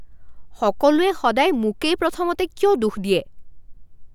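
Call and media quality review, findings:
No technical faults detected in the speech signal; no dropouts, distortion, timing or level anomalies found in the reviewed audio.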